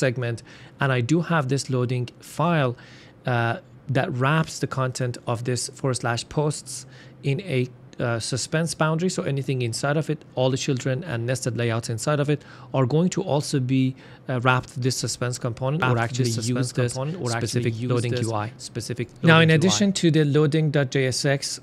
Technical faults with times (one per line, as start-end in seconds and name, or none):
15.82-19.84 doubled audio track